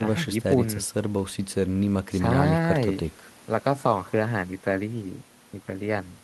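No technical faults can be heard anywhere in this recording.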